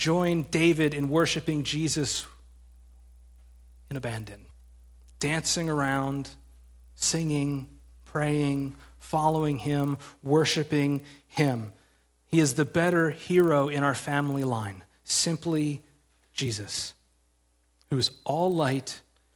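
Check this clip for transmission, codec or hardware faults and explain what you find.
A resampler restarted on every block runs throughout the speech. Each 40 ms block is converted on its own, leaving edge errors heard as a 25 Hz buzz under the voice, consistent with 24 kHz to 48 kHz upsampling.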